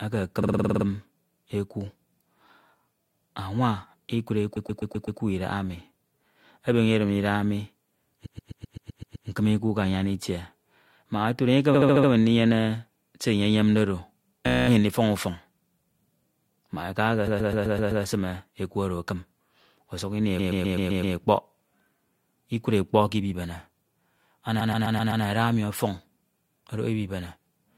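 Repeated frames make the speech stutter at 0.42, 4.56, 8.25, 11.73, 14.47, 17.27, 20.38 and 24.60 s. Each time, a run of six frames replays several times. Blocks range from 16 ms at 14.47 s to 128 ms at most points, and each repeat adds up to about one second. Unlike a dropout, nothing goes missing: identical sound recurs.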